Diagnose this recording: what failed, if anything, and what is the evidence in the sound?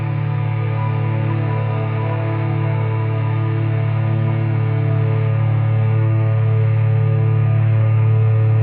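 Nothing in the recording stood out as a failure on listening, and no stage of the chain left any audible trace worth diagnosing.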